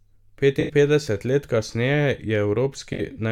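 AAC frame loss with concealment at 0.60–0.72 s and 2.93–3.01 s. The decoder refills the gaps from the last good spectrum, giving smeared, phasey patches rather than silent dropouts.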